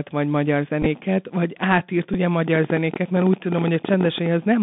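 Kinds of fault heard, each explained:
Bluetooth CVSD headset codec: throughout, the speech is squeezed into 150 Hz to 3.6 kHz by one-bit adaptive coding, leaving plainly audible scratchy sibilants and a granular hiss.
Bluetooth headset packet repeated: at 0.82–0.87 s after "vagy magyar" and 2.14–2.16 s after "vagy átírt", lost packets are replayed, giving brief buzzy stutters.
Train of clicks: from 2.48 to 4.27 s, about twenty unevenly spaced clicks at roughly 13 per second peak about 5 dB above the speech, likely from nearby interference.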